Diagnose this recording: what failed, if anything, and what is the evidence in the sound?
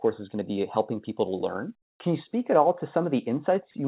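Between 1.82 and 2.0 s, a 180 ms pause loses its natural background, which is replaced by comfort noise. The real room sound, already about 55 dB below the loud parts, drops by about 16 dB more and turns smooth and featureless. The likely cause is discontinuous transmission in call processing: the sender stopped sending during silence and the receiver synthesised a shaped noise bed. On a spectrogram, a flat, even wash sits below the G.711-style 4 kHz ceiling, and the waveform's noise floor steps down abruptly.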